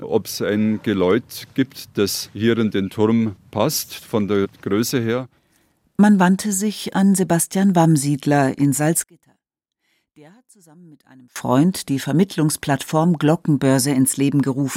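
From 9.04 to 11.36 s the speech collapses to a faint remnant, dropping by about 31 dB as if the voice had been pulled far back. The centred voice and its low end nearly disappear, leaving only a faint trace. The likely cause is one channel inverted: with one stereo side in reversed polarity, the identical centre content cancels when the channels are summed to mono, and only their small differences survive.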